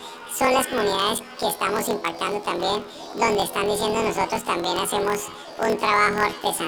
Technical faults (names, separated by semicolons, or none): planar audio read as interleaved